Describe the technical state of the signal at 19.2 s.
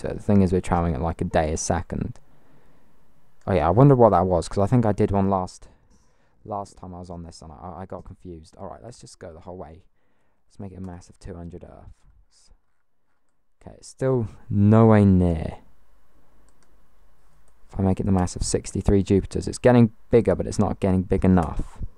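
At 19.2 s the signal is intact, with no audible fault at that moment.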